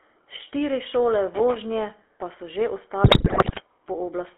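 Speech heard through the GSM full-rate codec, with a buzzy, gravelly roughness from the coarse pulse excitation that fits a 13 kbps full-rate link. The band runs only from about 300 Hz to 3.4 kHz, so a spectrogram shows a hard ceiling near 3.4 kHz and smeared harmonics below it. From 3.04 to 3.62 s, GSM bit errors corrupt the decoder's filter, pitch and gain values, and the speech breaks into squawks, pops and gargling. On a waveform this appears as sudden level jumps frame by frame, and on a spectrogram as blotchy, misplaced energy bands through that half-second, which points to a heavy error rate on a weak radio link.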